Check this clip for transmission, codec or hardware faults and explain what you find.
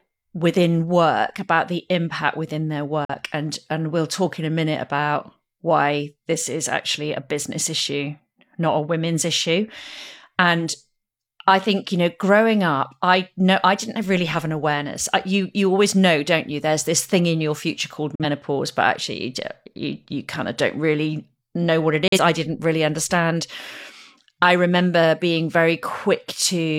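Three digital broadcast dropouts occur. They fall at 3.05–3.15 s after "the impact within their", 18.15–18.25 s after "in your future called", and 22.08–22.18 s after "really know what it". Each time the receiver got a bad frame and muted. The sound fades out within about 3 ms, leaving a short silent hole. Each loss fits a single frame of roughly 43 ms. The audio sent in those moments is gone.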